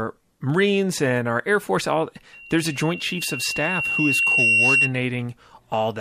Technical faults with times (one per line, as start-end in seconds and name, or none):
2.33-4.93 loudspeaker feedback squeal